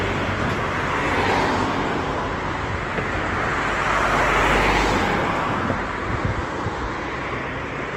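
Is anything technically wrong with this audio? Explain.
Yes. Throughout, the sound turns grainy, rough and noisy, with tones smeared into hiss. This is likely Opus compression in its music mode at a low bitrate, around 16 kbps. Starved bands get filled with folded or noise content. Bandwidth still reaches 20.2 kHz.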